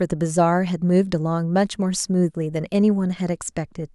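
No technical faults can be heard anywhere in the speech recording, and the signal stays intact and continuous throughout.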